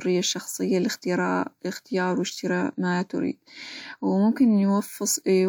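No audible technical faults present.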